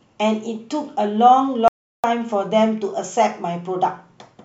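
At 1.68 s the speech cuts off abruptly in an audio dropout to silence. For 0.36 s, until 2.04 s, there is dead digital silence with no room tone. The input was likely lost while recording continued. That stretch of speech is gone.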